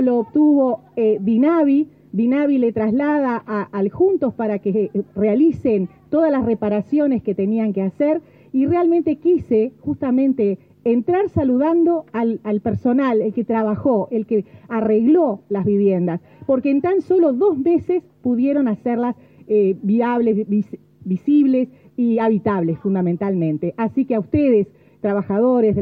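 No technical faults are audible.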